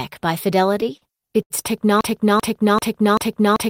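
From 0.67 to 1.52 s, late packets emptied the jitter buffer eight times, causing repeated stalls (stutter); concealment stretched 172 ms of sound, so the speech drags and hiccups.

From 2.01 s to the end, a stalled player or stream likely resent its last fragment: a broken-record loop repeats a 0.39 s piece four times, replacing the speech.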